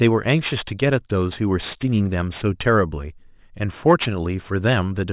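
Speech with aliasing throughout, from a drop from 24 kHz to 8 kHz without anti-alias filtering; content above 4 kHz folds back as gritty sibilants, and a spectrogram shows energy packed hard against 4 kHz, mirrored aliases roughly 20 dB down.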